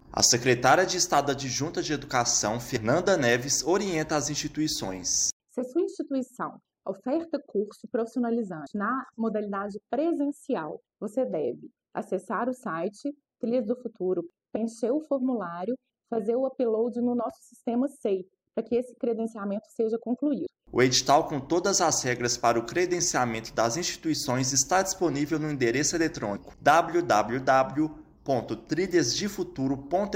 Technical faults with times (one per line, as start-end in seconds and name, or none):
2.76 audio missing between chunks
8.66 audio missing between chunks
20.46 audio missing between chunks